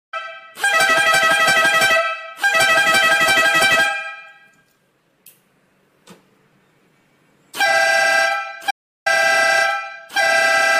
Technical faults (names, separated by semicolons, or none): audio dropout to silence